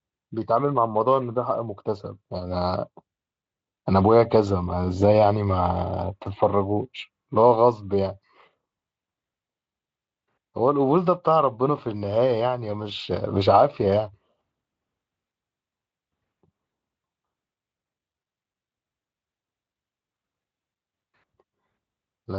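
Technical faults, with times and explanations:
No technical faults can be heard in this speech.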